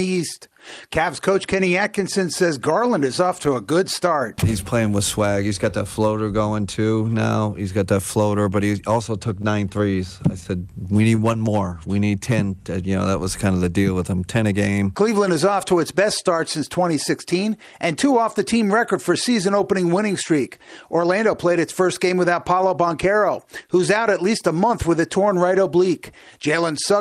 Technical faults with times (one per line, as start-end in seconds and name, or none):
9.29-10.47 scattered short gaps
10.85-11.49 repeated stalls (stutter)
11.50-12.12 jitter buffer slow-down
14.35-14.86 jitter buffer speed-up